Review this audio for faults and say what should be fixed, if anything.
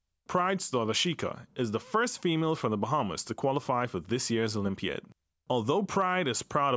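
Nothing should be fixed, since reviewing this speech audio turns up no faults.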